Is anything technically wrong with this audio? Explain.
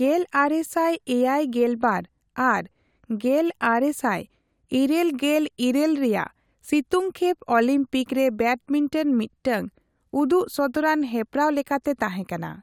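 No, there's nothing technically wrong here that I can hear, and this speech recording comes through without any problems worth pointing out.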